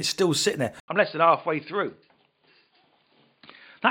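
Right after "still sitting there", at 0.8 s, an 80 ms gap opens and the speech returns dull and slightly quieter, with nothing above 4.8 kHz and a new faint background noise. That is an input switched to a poorer device, likely, rather than a simple filter, given the gap and changed noise.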